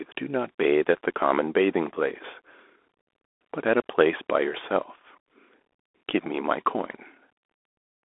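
Throughout, the speech shows Bluetooth CVSD headset codec damage. Nothing passes above 3.8 kHz. One-bit slope coding adds granular hiss and scratchy s sounds.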